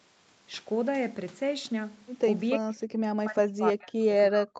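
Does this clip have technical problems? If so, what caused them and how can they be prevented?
Yes. The speech drops out twice, from about 2.57 to 2.73 s and again from 3.23 s to the end of the clip. In both places the level falls steeply, by roughly 40 dB at the deepest point. This is likely speech suppressed in double talk. The far side was talking at the same moment. The echo canceller could not tell this talker apart from its own loudspeaker echo, so it turned everything down. Good acoustic isolation between loudspeaker and microphone helps prevent it, and so does an echo canceller tuned for double talk.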